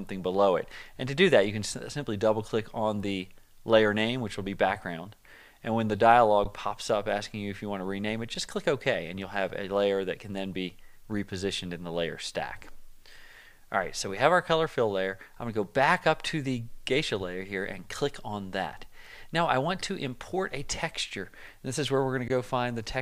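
Underruns with held sample occur at 6.44, 8.35 and 22.28 s. The buffer emptied, so the output froze flat for about 15, 5 and 17 ms. Playback then resumed without loss, softly.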